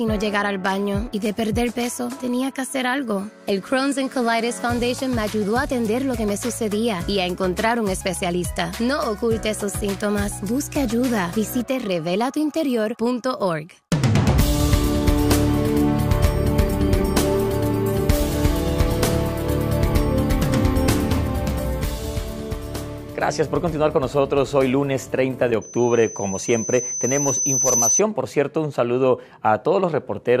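From 25.61 to 28.02 s a loudspeaker feedback squeal rises at 6.1 kHz. The microphone is re-amplifying its own loudspeaker until that frequency runs away, swelling over about two seconds to roughly 5 dB above the programme. That gradual self-building growth separates it from a steady interference whine.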